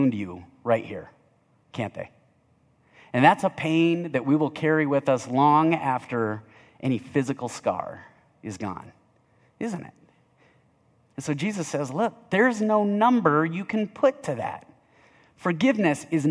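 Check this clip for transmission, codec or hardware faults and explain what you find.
Nothing worth flagging turns up here; the speech comes through steady all the way, with no faults to point to.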